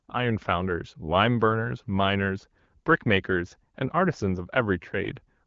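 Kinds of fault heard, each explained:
No kinds of fault are heard in this speech, which comes through the AMR wideband (HD Voice) codec at 12.65 kbit/s with nothing above about 7.5 kHz.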